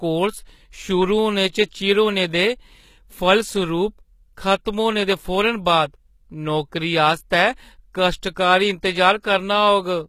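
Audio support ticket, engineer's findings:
Treble sounds synthetic and gritty throughout, sibilants lispy and metallic, plainly audible. Likely HE-AAC compression, fitting roughly 20 kbps: upper band rebuilt from copied lower bands under a coarse envelope, so harmonics misalign above the crossover.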